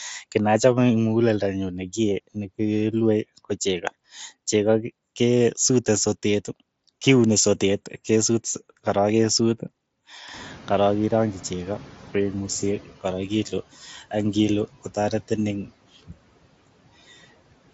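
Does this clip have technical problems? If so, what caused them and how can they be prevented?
Yes, there's a noise suppressor catching up. Room noise jumps by about 18 dB around ten and a half seconds, and from 10.33 to 12.95 s it leaks through under the speech before the suppressor's estimate adapts over 2.6 s and pulls it down by about 10 dB. A faster-tracking noise estimator would close that gap.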